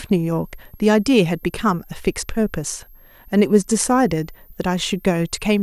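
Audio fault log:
Throughout, switching supply whistle: a thin, high whistle sits under the speech for the whole clip, roughly 35 dB below it, its pitch wandering between 12.5 kHz and 13.5 kHz rather than holding steady. A switching power supply in the recording chain is running its regulator in an audible burst mode or beating against another converter, and as the load shifts its switching rate drifts, carrying the whistle's pitch with it.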